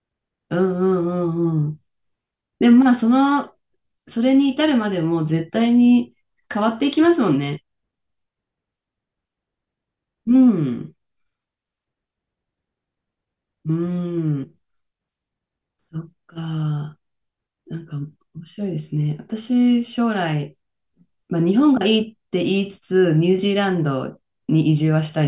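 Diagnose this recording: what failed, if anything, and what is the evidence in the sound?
Nothing failed; no fault can be heard anywhere here.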